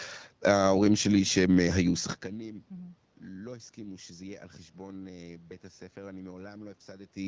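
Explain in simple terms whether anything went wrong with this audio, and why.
Nothing went wrong here: the sound arrives as an ordinary HD Voice call would deliver it, and the room background and the shift in loudness at about 2 s, where the talker simply moves relative to the microphone, come from the recording situation rather than from any problem in the system.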